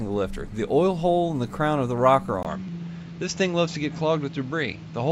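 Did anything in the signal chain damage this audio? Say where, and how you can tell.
Yes. At 2.43 s there is a gap of about 20 ms, after which the sound runs to the end with nothing above 7.6 kHz and a new noise floor roughly 30 dB below the signal, while the overall level stays about the same. The sudden band-limiting, fresh background noise and unchanged loudness likely come from an input switched to a poorer device at the driver or routing stage, such as a fallback microphone or headset path.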